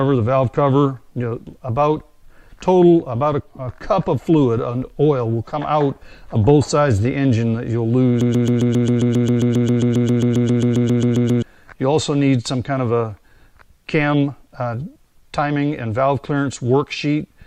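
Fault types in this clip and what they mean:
Broken-record loop: from 8.21 to 11.42 s, a 134 ms fragment repeats exactly, back to back, 24 times, producing a rigid, stuttering rhythm. Whatever sound belonged in those three seconds is missing. The likely cause is a player or stream stalling and resending the last piece it held. On a waveform the stretch appears as identical 134 ms blocks tiled end to end. A spectrogram shows the same slice copied repeatedly, with evenly spaced vertical seams.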